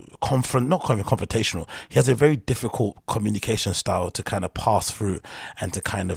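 No technical faults are audible.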